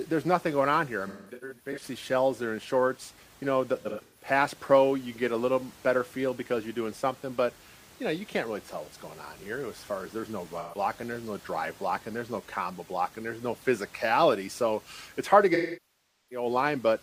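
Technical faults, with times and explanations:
1.07–1.83 s, AAC frame loss with concealment: after "going on here I", about 430 ms of audio dropped across 680 ms, gaps up to around 200 ms, leaving smeared, noisy patches.
3.81–4.26 s, AAC frame loss with concealment: 256 ms went missing over 340 ms, gaps up to about 150 ms, so the decoder's guessed spectrum sounds phasey and blurred.
10.59–10.78 s, AAC frame loss with concealment: a 128 ms dropout between "far as there's no" and "there's no drive blocking" is patched from the previous spectrum, giving a brief noisy smear.
15.54–16.46 s, AAC frame loss with concealment: after "it's hard to", a 768 ms loss outlasts concealment, so the repeated spectrum decays toward silence before the sound fades back.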